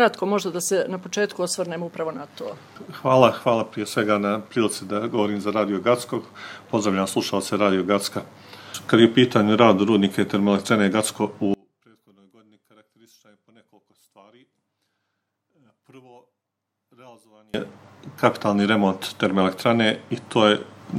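DECT cordless phone buzz runs from 0.0 to 10.47 s: a nearby DECT handset or base transmits a radio burst every 10 ms, which the audio circuitry rectifies into a thin, steady 100 Hz buzz rich in harmonics, sitting faintly, well below the main sound.

One channel inverted is the likely cause of what happens from 11.54 to 17.54 s. The sound drops by about 35 dB to a faint residue, as if one channel's polarity were reversed and the shared content cancelled when the channels combined to mono.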